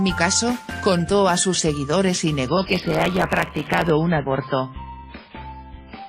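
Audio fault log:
2.48 s to end, adaptive stream at a lower bitrate: Codec artefacts abruptly rise, without any gap at the switch. The stream dropped to a much lower-bitrate version when the connection slowed, and the character fits a step from roughly 128 kbit/s MP3 down to roughly 16 kbit/s MP3. At that bitrate the encoder must discard the upper band and quantise what remains coarsely.
2.66 to 3.90 s, block size mismatch (truncated): A steady buzz at 100 Hz rides on the sound, and the audio runs about 1.07 times too fast while staying at roughly its normal pitch. One stage is handing over longer blocks than the next stage reads, which fits 512-sample blocks being written. The tail of each block is discarded, so every block boundary becomes a small splice that repeats 100 times a second. Dropping that material also shortens playback.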